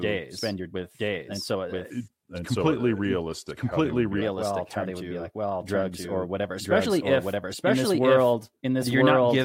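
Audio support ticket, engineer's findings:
Doubled audio track, whole clip. Full-band copy of the speech about a second behind, near equal level, no room colour. Likely a second capture path or misaligned edit.

Section at the wrong speed, 1.90–4.22 s. Playback at 0.868x, speech slow and deep, roughly three semitones low. Likely clock mismatch in editor or player.

Compressed frames skipped, 6.85 s. Jump of about 40 ms. Fits two dropped 21.3 ms frames, decoder or file damage.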